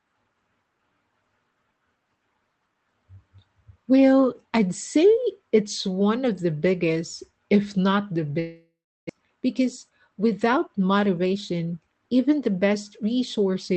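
At 8.39 s, right after "biggest if not the", the speech breaks off for about 0.72 s, to 9.11 s. This is most likely a long network dropout: no audio arrived, so the receiver stretched the last sound into a fading buzz, and after that only near-silence remains. Roughly 0.4 s of the original speech never returns. When sound resumes, it picks up further along, with the lost stretch simply gone.

From 9.19 s to 12.02 s, ending just before "even the", the speech runs about 10% fast at unchanged pitch. This is a jitter buffer speed-up. Delayed audio arriving in a burst left the buffer holding around a third of a second more than it targets. The receiver worked that backlog off by repeatedly cutting out short pitch-period-sized slices, so this passage sounds hurried.

Throughout, the audio carries low-rate call-codec coding noise and has no content above 8 kHz, as expected from the Opus call path.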